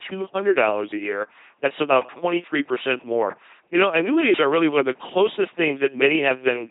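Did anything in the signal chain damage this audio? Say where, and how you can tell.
Yes. LPC-10 vocoder damage, at the codec stage, runs through the whole clip. The speech has a heavy buzzing, mechanical robot quality, with nothing above about 3.8 kHz. Each moment is rebuilt from a small all-pole vocal tract filter driven by either a pulse train or noise, so every stretch comes out wholly voiced or wholly unvoiced. The natural voice detail is replaced by synthetic buzz and hiss. That points to a very low bitrate of around 2.4 kbit/s.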